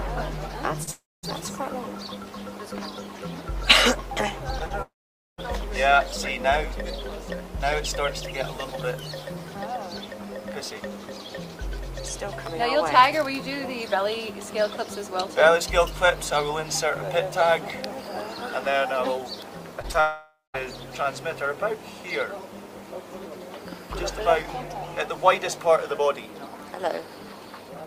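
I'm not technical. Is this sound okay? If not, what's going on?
No. The sound has two related problems, both caused by pieces of the audio not arriving in time.

The first is short concealed packet loss, heard as brief smears or wobbles at 0.83, 4.59, 4.66, 19.82 and 19.92 seconds. Each time, between about 20 and 40 milliseconds of audio went missing, and the player covered the hole by stretching out whatever sound came just before it. These are too short to hear as gaps. Instead the sound wobbles for an instant and then carries on.

The second is a long network dropout, which follows the short ones each time: from 0.91 to 1.25, from 4.82 to 5.40, and from 20.00 to 20.56 seconds. The likely cause is that the connection stopped delivering audio altogether for a third to over half a second. The sound fades out into real silence, lasting about a quarter second, half a second and a fifth of a second respectively, and then jumps back in with that part missing. 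The clear stretch of silence is what sets these apart from the brief smears.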